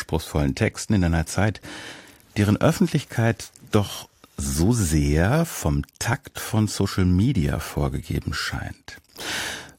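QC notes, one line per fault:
6.13 s, overlap between stream segments: a tiny skip forward, as about 6 ms of sound drops out and the waveform jumps straight to a later point. Two stream segments claimed the same stretch of time at their join, and the player discarded the overlapping portion as a duplicate even though it held real audio.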